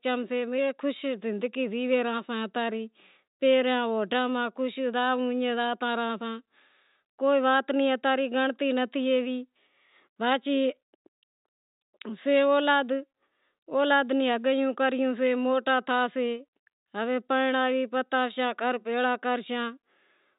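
No technical faults can be heard in the speech, which carries the expected band limit of G.711 telephone coding, with nothing above 3.8 kHz.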